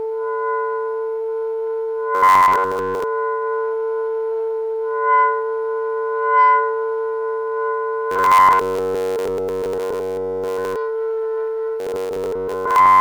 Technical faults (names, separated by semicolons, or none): robotic sound from repeated short buffers